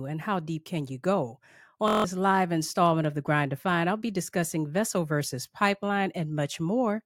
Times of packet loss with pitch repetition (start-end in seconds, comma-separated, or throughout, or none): none